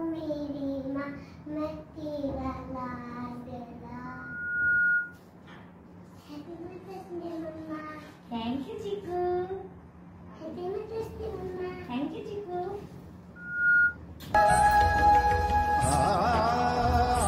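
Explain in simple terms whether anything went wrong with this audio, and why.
Two things go wrong here. First, there's loudspeaker feedback squeal: a microphone picks up its own speaker and one pitch, around 1.4 kHz, feeds on itself. It swells up over most of a second from 4.05 to 5.19 s, then again, faster and louder, from 13.36 to 13.97 s.

Second, the adaptive stream drops to a lower bitrate from 6.44 to 10.44 s, as if the connection slowed. The sound suddenly turns duller and swishy, with nothing left above about 14.9 kHz, then snaps back, with no gap either way.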